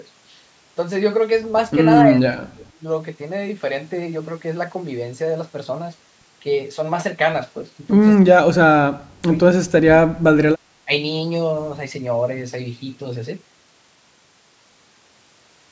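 Speech, passed through call microphone processing that leaves nothing above 8 kHz, with the talker's level collapsing four times: 2.1–2.8 s, 8.27–9.27 s, 9.6–10.37 s, and briefly at 10.85–10.91 s, by roughly 30, 35, 30 and 15 dB. This is speech suppressed in double talk, likely an echo canceller that, with both sides talking at once, mistook the near talker for loudspeaker echo and turned everything down. On a waveform the envelope pinches into narrow, broken stretches; on a spectrogram those spans go dark or patchy.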